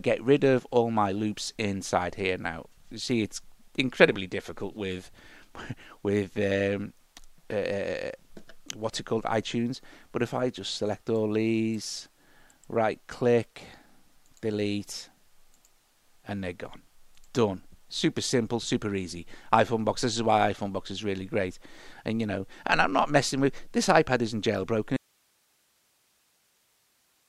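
At 24.97 s the sound cuts off abruptly and never returns, an audio dropout to a faint residue: only hiss remains, roughly 40 dB below the signal, likely from a live path after a break. Waveform collapses to a thin band; spectrogram shows broadband noise.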